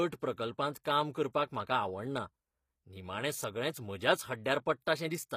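This speech clip was most likely passed through HE-AAC compression, probably HE-AAC v2 at a low rate around 24 kbps. Only the lower spectrum is coded directly, and the treble is rebuilt by spectral band replication, which copies lower bands upward and shapes them with a coarse envelope. That synthetic treble does not match the original, so its harmonics fail to align across the crossover. The codec damage is plainly audible throughout, and nothing is present above 15.5 kHz. The codec also produces pre-echo at 0.73 s and again at 0.84 s, just before "काम करपाक म्हाका आवडना". In each case a sharp attack falls late in a transform block. The quantisation noise, sized for the loud part, is spread across the whole block and fills the quiet moment ahead of the onset. A brief hiss of about 19 ms and then 16 ms precedes each attack, leaving it soft and smeared.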